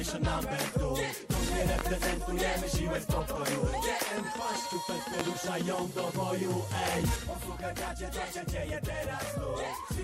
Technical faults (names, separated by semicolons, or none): loud pop; sudden gain jump